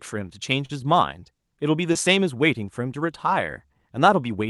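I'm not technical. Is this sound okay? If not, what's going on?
No. Two short concealed packet losses occurred at about 0.65 s and 1.93 s: small pieces of the speech arrived too late, so the receiver briefly stretched the preceding sound to cover each gap, causing a quick smear or wobble.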